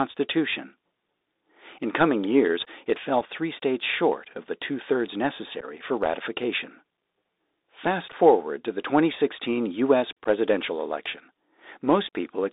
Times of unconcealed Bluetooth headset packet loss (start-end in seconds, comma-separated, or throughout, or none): 3.21, 5.61-5.64, 8.12, 10.24-10.28